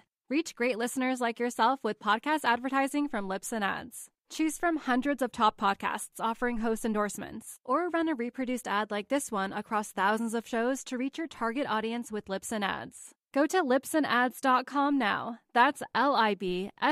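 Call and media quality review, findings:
No audible faults found in this speech recording.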